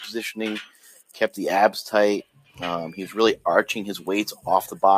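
A noise suppressor applied to music or sounds, one designed for speech, stays active for the whole clip. It treats sustained and ambient parts of the audio as noise and turns them down, so its gain keeps moving, with the loss swinging by about 10 dB. Onsets get through while held and decaying parts are pulled down, and the level rises and falls with the material instead of staying steady.

From 0.64 to 1.17 s, the sound is cut by the noise suppressor, dropping by up to about 17 dB for roughly half a second. From 2.23 to 2.59 s it happens again, with a drop of up to about 16 dB over a little under half a second. In both stretches the sound is pushed down or its tail is cut short.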